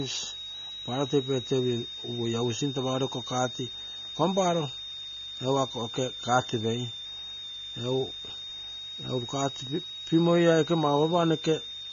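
A speech recording carries two faults from start to finish. A high switching supply whistle sits around 4 kHz, wandering between 3.6 and 3.9 kHz. It is strong, not far below the speech. A switching power supply running in an audible burst mode or beating with another one produces this tone. The speech also sounds dull and smeared. Nothing is present above 6.9 kHz, and sustained sounds and sibilants have a warbling, fizzy texture. The likely cause is AAC compression at a low bitrate, which fits about 24 kbps. The encoder has cut the top of the spectrum and coarsely quantised the rest.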